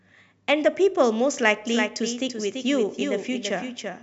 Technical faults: doubled audio track

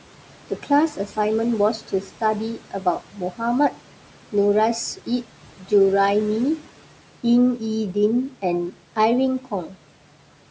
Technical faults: noise suppressor artifacts; speech cut by the noise suppressor

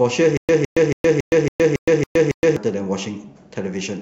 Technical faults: stutter with silent gaps

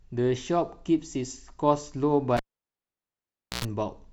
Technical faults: cable pulled and plugged in

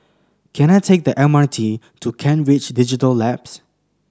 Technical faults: none

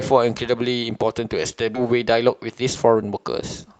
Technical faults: skip ahead; jitter buffer speed-up

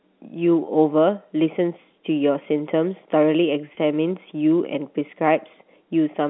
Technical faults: packet loss with pitch repetition

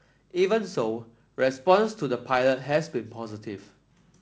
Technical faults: none

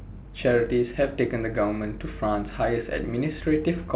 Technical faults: none

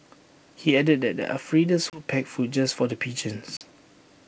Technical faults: packet loss on an ADPCM call

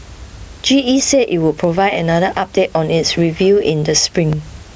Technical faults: gain pumping

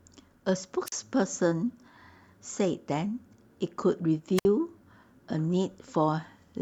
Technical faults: wireless microphone squelch dropout

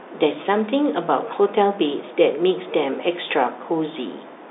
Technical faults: none

